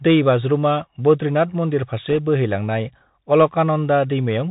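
Throughout, the speech sounds boxed-in and dull, with a granular hiss underneath and scratchy s sounds: the Bluetooth CVSD headset codec, cutting everything above 4 kHz, consistent with a 64 kbps stream. From 2.10 to 2.18 s, a brief rushing crackle appears: bit errors on the Bluetooth voice link, at around one percent, flipping bits whose effect fades without clicks.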